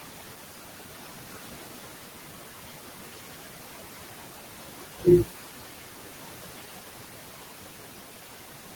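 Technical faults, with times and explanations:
Throughout, noise suppressor artifacts. The processing pulls down whatever bands it judges to be steady noise, cutting it by about 11 dB. That cut is applied frame by frame. So the background dips in the pauses and swells back under the speech.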